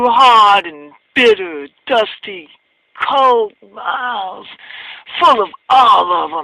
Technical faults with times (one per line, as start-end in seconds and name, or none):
0.00-6.43 clock drift between sender and receiver
0.44-6.06 repeated timing corrections